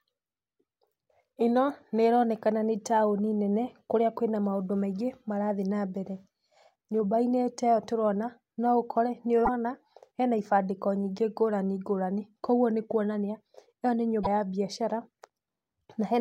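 A broken MP3 bit reservoir garbles this speech at 9.45 to 9.49 s, after "ĩyo tũrona no ũkore", and 14.23 to 14.27 s, between "kuoguo nĩkuonania ĩyo nĩ" and "ya mbiacara". Each jump is a brief glitch, likely where dropped 26 ms frames left following frames reading borrowed bits from the wrong data.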